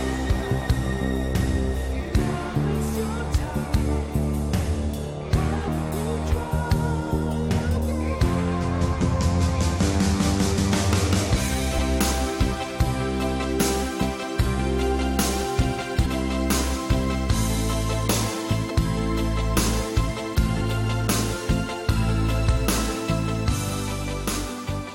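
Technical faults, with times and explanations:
1.00, 5.67, 7.76, 10.57, 11.77, 16.05–16.07, 18.69–18.71 and 20.60 s: compressed frames skipped. The sound jumps ahead by roughly 70 to 300 ms each time, in steps that fit a 23 ms frame.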